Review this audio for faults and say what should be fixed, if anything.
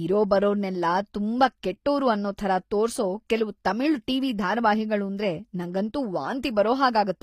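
The recording was likely pushed through HE-AAC compression at a low bitrate, which fits something around 24 kbps in the v2 profile. Only the lower spectrum is coded properly, and the treble is synthesised by spectral band replication, copying lower bands upward under a coarse envelope. Throughout the speech the top end sounds false, with sibilants turning gritty and metallic where the copied harmonics fail to line up, and nothing survives above 15.5 kHz. To prevent it, encode from the original at a higher bitrate with a full-band codec such as plain AAC-LC rather than an SBR profile.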